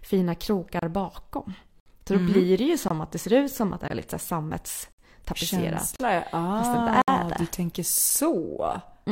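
Gaps between stream segments leave hard-edged silent holes of 5 to 63 ms about once a second, at 0.79, 1.80, 2.88, 3.88, 4.92, 5.96, 7.02 and 8.10 s, where segment timestamps don't quite meet.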